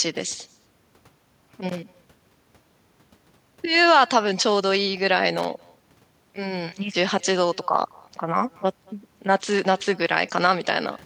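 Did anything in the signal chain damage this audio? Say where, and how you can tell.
Yes. Echo with no canceller runs through the whole clip, so the damage sits at the call-processing stage. Every phrase of speech is followed around a fifth of a second later by a faint, thin copy, about 28 dB below the direct speech. That delay fits a network round trip: the far end's loudspeaker output is leaking into its microphone and returning down the line, and no echo canceller is removing it before it comes back.

Loose connector crackle appears twice, from 1.69 to 1.90 s and again from 5.38 to 5.45 s, which points to the analogue wiring. Each burst is an irregular scratchy crackle rather than a clean dropout or a regular click pattern. A worn or dirty contact is intermittently making and breaking as it shifts, chopping the signal in rapid fragments.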